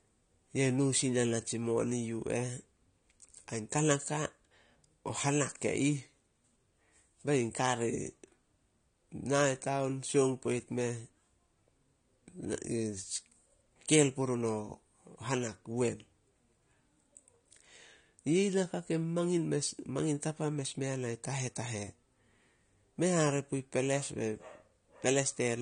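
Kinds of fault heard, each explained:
AAC compression: The speech sounds dull and smeared from start to finish. Nothing reaches above about 9.7 kHz, so the top of the spectrum is simply missing. Sibilants come out fizzy and thin, and sustained sounds have a plainly audible warble. These are the marks of a perceptual codec working with too few bits. It quantises frequency lines coarsely and drops or fills bands. The likely cause is AAC-LC encoding at a low bitrate, in the region of 32 kbps.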